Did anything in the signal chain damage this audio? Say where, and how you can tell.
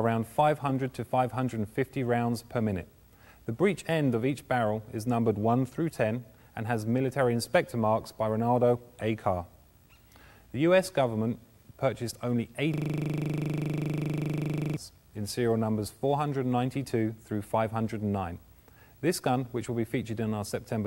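Yes, at the driver or buffer stage: a system hang loop from 12.74 to 14.77 s. The system froze while the output kept replaying one 40 ms buffer, about 50 times, giving a 25 Hz buzz. The waveform shows identical blocks, and the spectrogram shows evenly spaced vertical stripes.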